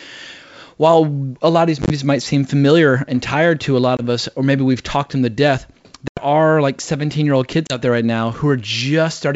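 Packet loss on an ADPCM call replaces dropped packets with silence and throws the decoder's predictor out of step with the sender, so each hard-edged gap is followed by slightly distorted speech until it settles. This happens four times:

1.82 s: 50 ms lost in short holes spread over 80 ms.
3.97 s: 20 ms lost after "tired to a lot".
6.08 s: 90 ms, about ten packets, lost after "talked them to death".
7.67 s: 30 ms lost before "there right now".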